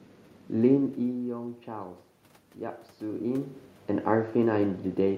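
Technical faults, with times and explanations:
No technical faults can be heard in this speech recording.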